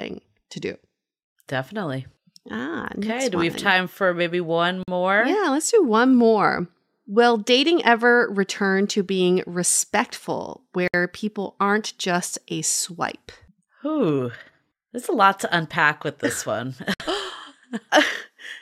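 At 4.83 s, after "time for maybe one", then 10.88 s, between "return to being respectful" and "people aren't just a", and 16.94 s, the speech drops out for 47, 60 and 60 ms: gaps at joins of encoded pieces, spaced 6.0 s apart. Untrimmed encoder delay and last-frame padding leave silence, a flat waveform and blank spectrogram column with smeared edges.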